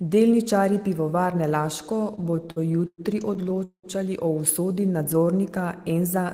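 Repeated stalls (stutter) run from 2.15 to 3.86 s: late packets drain the jitter buffer nineteen times, and the receiver stretches the last sound, up to 191 ms, so the speech drags.

A jitter buffer slow-down follows at 4.66 to 5.34 s, where repeated pitch periods add 80 ms, playing the speech at about 89% speed with unchanged pitch.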